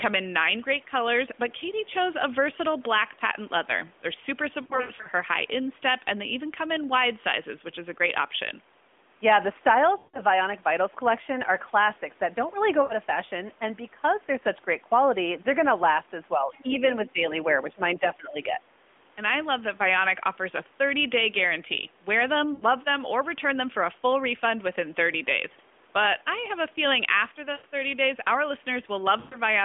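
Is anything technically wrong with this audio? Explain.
Yes. The speech has three kinds of fault, all heard through a narrowband, mobile-sounding line.

Lost AMR speech frames: at 4.62–5.08 s, 9.98–10.21 s, 12.82–12.93 s, 22.54–22.64 s, 27.52–27.66 s and 29.20–29.37 s the voice briefly smears, warbles and sags. The first is a patchy stretch with gaps of up to 80 ms. Radio errors corrupted frames, and the decoder stretched the last good sound at fading gain.

Speech suppressed in double talk: at 16.36–16.84 s, 17.05–17.21 s and 17.63–18.59 s the voice ducks in chunks, by roughly 10 to 15 dB at its deepest. The likely cause is the echo canceller muting the talker while the far end spoke over them.

Other side's voice leaking through: at 16.52–16.62 s and 16.88–16.93 s a faint second voice slips in, far below the main speech. It is likely uncancelled loudspeaker echo from the far end, picked up by the talker's microphone.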